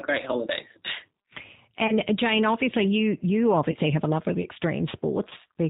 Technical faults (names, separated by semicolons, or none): G.729 codec; VoIP packet loss concealed by the speech codec